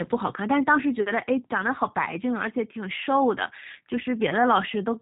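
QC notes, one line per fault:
Throughout, G.729 codec: the speech is rebuilt rather than carried, with each 10 ms frame reduced to a vocal tract filter, a pitch predictor and a few pulses, so voiced sounds come out plainly rough and faintly synthetic. Nothing above about 3.8 kHz survives, leaving sibilants dull. The coarseness fits a low-rate VoIP path around 8 kbit/s, most likely the G.729A variant.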